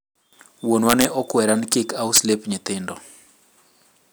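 Integer overflow cracks the speech at 0.89 to 1.05 s, at 1.73 s, and at 2.16 to 2.18 s, where peaks overshoot by about 1, 1 and 5 dB and wrap to the opposite sign instead of flattening. That full-range flip gives violent snaps, harsher than clipping's buzz.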